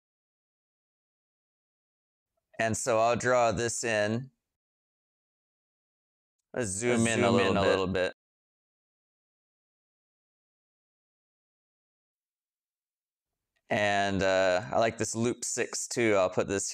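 From 6.87 s to 8.13 s a doubled audio track appears: a full-band copy about as loud as the original trails it by roughly 300 ms, dry and uncoloured, cutting in and out abruptly. The likely cause is a slower second capture path or an edit holding two offset copies.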